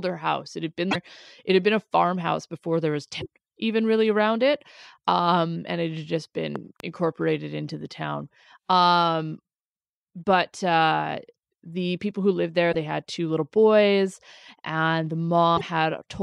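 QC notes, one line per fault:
0.90–0.96 s, 3.20–3.26 s, 12.71–12.75 s, 15.56–15.62 s: broken MP3 bit reservoir. Likely frames of roughly 26 ms were dropped, so the following frames reach back for borrowed data and decode the wrong bytes. The speech skips ahead with a brief chirp or noisy hole. These occur after "farmhouse before there was" and after "the people who lived".
6.56–6.82 s: loud pop. A voltage step or pulse, likely from a plug, switch or driver glitch, enters the signal. It produces two sharp pops about 10 dB above the speech, after "and it had just", while the speech continues underneath.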